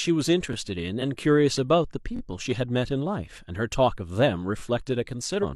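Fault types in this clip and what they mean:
Damaged data in a compressed stream: corrupted bytes in the encoded stream make the decoder misread frames and lose sync until it locks onto a later frame header, producing short garbled bursts at 0.98 to 1.03 s and 5.39 to 5.45 s, each about 50 to 60 ms long and heard as a chirp or blip. On a spectrogram each shows as a brief vertical band of smeared energy that breaks the speech harmonics; the waveform has an abrupt discontinuity there.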